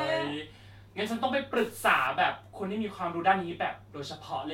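Speech clip with a stuck bit between 1.57 and 2.07 s. For that half-second the audio takes on added noise and distortion that tracks the waveform rather than sitting under it as a steady hiss. The likely cause is one data bit held at a fixed value by a broken line or converter, so roughly half the samples are wrong by that bit's weight, in a pattern set by the signal's own values and sign.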